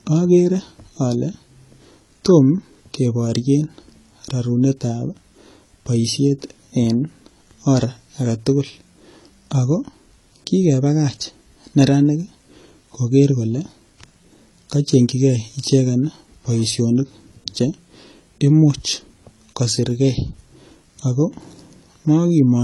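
Throughout, the speech has nothing above 11.9 kHz and carries two overlapping layers of smeared, swirly artefacts. This is likely transcoding between lossy codecs, fitting AAC-LC then HE-AAC.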